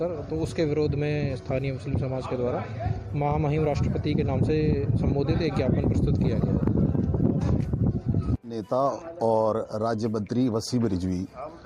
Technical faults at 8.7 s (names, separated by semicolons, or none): none